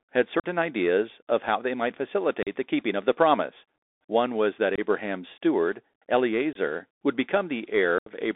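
Throughout the clip the speech sounds boxed-in and thin, with scratchy s sounds, a granular hiss beneath it, and roughness on louder high-frequency moments. This is the Bluetooth CVSD headset codec. Its one-bit, 64 kbps delta coding tracks the waveform with an adapting step that cannot keep pace with fast rises. The line keeps only about 300 Hz to 3.6 kHz, so everything above that is gone.

At 0.40 s, just before "ideas of how they", the sound drops out abruptly for about 41 ms. The same happens at 2.43 s, between "of how they might" and "the keeping of the", again for about 41 ms. Shorter holes of about 23 ms follow at 4.76 s, right after "was that", and at 6.53 s. The longest, about 79 ms, comes at 7.98 s. These are unconcealed Bluetooth headset packet loss: groups of short voice packets, from roughly seven to twenty at a time, never arrived and were replaced by silence or an idle pattern, leaving chopped gaps.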